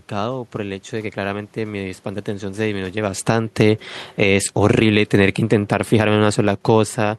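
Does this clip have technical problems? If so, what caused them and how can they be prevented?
Yes. The automatic gain falling happens twice: the automatic gain control judged the input too loud or its background noise too strong and pulled its gain down gradually, first by about 5 dB from 3.14 to 3.45 s, then by about 7 dB from 4.06 to 7.14 s. The speech sinks in level each time, and the room noise drops along with it. Raising the control's threshold, or fixing the gain once levels are set, would prevent it.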